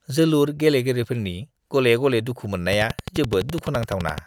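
From 2.73 s to 4.19 s, a train of clicks ticks steadily at about 11.7 per second, around twenty in all, standing roughly 10 dB above the speech. It is likely interference or a faulty connection or power supply. A waveform shows evenly spaced spikes, and a spectrogram shows thin vertical broadband lines.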